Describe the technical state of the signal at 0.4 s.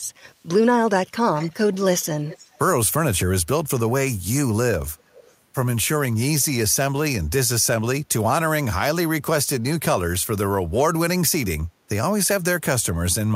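At 0.4 s there is an echo leak from 0.35 to 0.46 s: a faint copy of the speech, roughly 40 dB down, returns 268 ms late. This likely comes from a far-end echo canceller missing loudspeaker pickup. Unlike room reverberation, it is a distinct delayed repeat, not a smooth tail.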